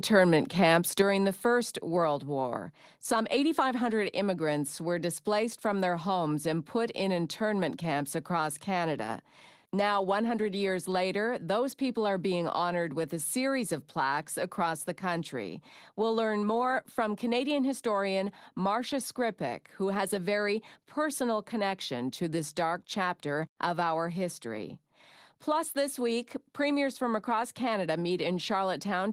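At 1.02 s the speech and the background beneath it drop together by about 5 dB in a single abrupt step. This points to a microphone volume stepped down, likely the call software cutting the device's input level after judging it too loud.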